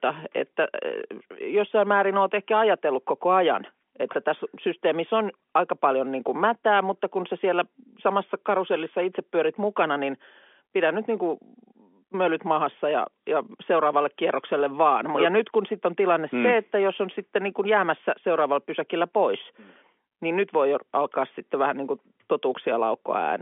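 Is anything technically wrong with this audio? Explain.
No, this speech carries no technical fault; it has the narrow band of an ordinary G.711 telephone line, running from about 250 Hz to 3.4 kHz with nothing above roughly 3.7 kHz, which is how that phone format is meant to sound.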